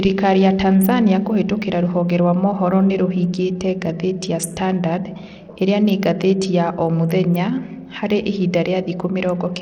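Throughout, the speech has a gritty, grainy edge with dull, flickering treble, likely from Bluetooth SBC compression at a starved bit allocation, which fits roughly 80 kbps.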